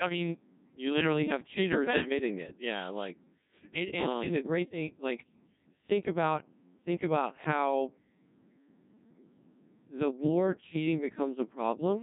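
Speech runs through a Codec 2 vocoder for the whole clip, heavily damaged, with nothing above 3.8 kHz. The voice sounds robotic and buzzy because the decoder rebuilds it from sine waves driven by pitch, voicing and energy rather than keeping the waveform, and the coarseness points to a rate around 1.6 kbit/s. Unlike a starved waveform codec, which leaves swirling or warbling smear on the original signal, this sounds synthetic and mechanically pitched.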